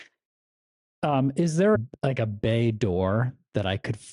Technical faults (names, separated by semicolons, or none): damaged data in a compressed stream